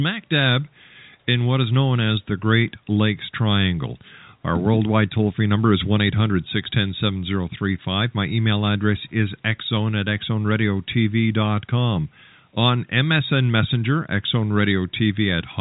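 No technical faults are present.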